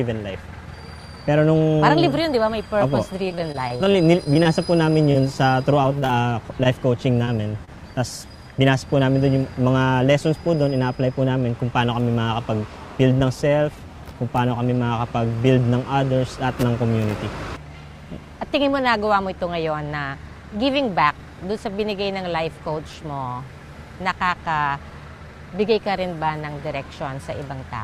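From 3.25 to 5.16 s the audio has repeated packet loss, heard as a choppy, robotic texture. Packets keep failing to arrive, and each hole is bridged by extending the preceding sound before the next loss lands. The dropouts come in quick succession, none longer than about 38 ms. Together about 180 ms of material is missing, and about 14% of the span is synthetic fill, which gives the stuttering quality.

A second stretch from 5.82 to 7.69 s has scattered short gaps. Isolated packets go missing here and there, and each is patched by continuing the last sound. These are brief hiccups and smears rather than sustained choppiness. There are several of them, the longest around 30 ms, totalling about 100 ms of lost audio. Roughly a twentieth of that span is concealment, so the disturbance is lighter than in the earlier stretch.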